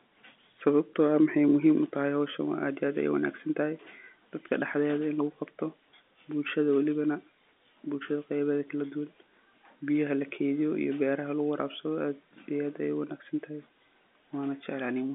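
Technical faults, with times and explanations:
No technical faults heard.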